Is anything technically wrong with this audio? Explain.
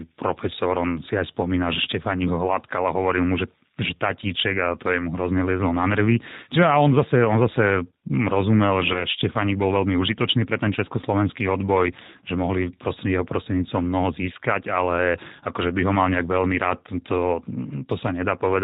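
Yes. Two technical faults can be heard in this speech recording.

Throughout, the speech carries plainly audible G.729 codec damage, consistent with a low-rate VoIP codec around 8 kbit/s. The decoder rebuilds each 10 ms frame from a vocal-tract filter, a pitch predictor and a handful of pulses rather than the true waveform, so the voice sounds rough and slightly synthetic. A spectrogram shows nothing above 4 kHz and smeared, grainy harmonics below it.

From about 8.93 to 9.06 s there is VoIP packet loss concealed by the speech codec. The gap points to one lost packet of roughly 20 ms. The decoder filled it by repeating its last pitch and filter with falling gain, and because each frame builds on the previous one, the voice stays weak and distorted until about 9.06 s. It sounds like a brief buzzy tone or coloured noise that fades. The waveform shows a short decaying stretch, and a spectrogram shows flattened, repeated harmonics there.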